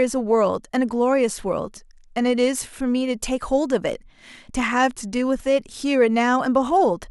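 At 2.58, 4.78 and 5.79 seconds the speech carries a single sharp click, each one brief and isolated. These are most likely dropped samples: a couple of samples, a tiny fraction of a millisecond, missing from the stream, so the waveform steps abruptly from one value to a later one instead of moving smoothly. Nothing audible is lost. On a spectrogram each click shows as a thin vertical line spanning the frequency range, and the waveform shows a small discontinuity at that point.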